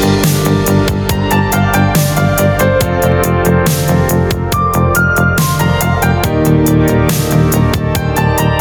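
Gain pumping runs through the whole clip, with the level swinging by roughly 10 dB. Loud and quiet passages sit unnaturally close together, and the result sounds squashed and breathing. The likely cause is an input gain set far too high, with a fast limiter or compressor clamping down on every peak and releasing in the pauses.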